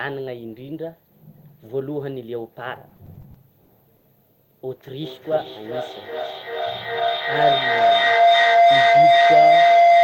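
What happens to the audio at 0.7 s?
Nothing goes wrong at 0.7 s; the speech carries on cleanly there, with no dropout, click, distortion or glitch.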